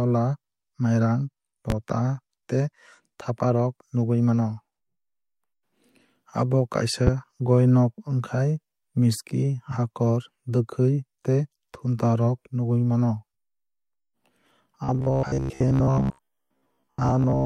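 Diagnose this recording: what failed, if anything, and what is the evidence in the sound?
Loud pop at 1.70–1.74 s and 7.07–7.11 s, peaking about 10 dB and about 15 dB above the speech, which continues underneath. Likely an electrical transient in the analogue wiring.

Robotic sound from repeated short buffers likely at the driver or buffer stage from 14.84 s to the end: a rigid 66.7 Hz buzz, one repeat per 15 ms, with most of the audio repeated rather than new.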